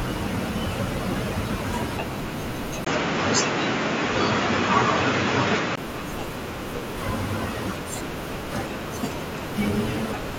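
Input switched to a poorer device, from 2.85 to 5.78 s: the speech abruptly turns dull and boxy, with nothing above 7.3 kHz, a level shift of a few decibels and a new, faint background noise sitting well below the speech. A 20 ms silence marks the change. The likely cause is the recording input jumping to a narrower-band microphone or headset profile, with its own tone and noise, before switching back to full bandwidth.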